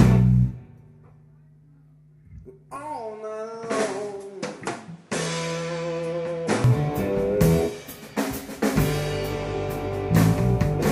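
The audio changes character abruptly at 2.76 s: nothing remains above 11.2 kHz, the level drops by roughly 5 dB, and a new noise floor appears roughly 30 dB below the signal. The transition has no gap of silence. At 6.64 s the full band and the original level and noise return just as suddenly. This pattern is likely an input switched to a poorer device, with its narrower bandwidth, own gain and own background noise, for that stretch.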